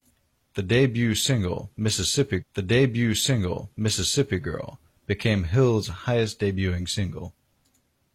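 At 2.37 s the speech jumps back and replays about 2.0 s of material, running until 4.37 s: a stream segment repeated, because the player queued the same segment twice. A small blip marks the jump, and unlike a short stutter loop, a whole stretch of programme repeats intact.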